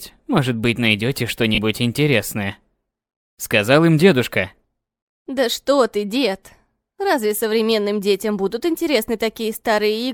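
At about 1.55 to 1.58 s there's a burst of lost LE Audio frames, roughly 30 ms, which fits three 10 ms frames dropping out. The LC3 decoder covers the gap by repeating the last spectrum with scrambled signs, so anything tonal briefly turns into a short noisy smear, with the light compression underneath.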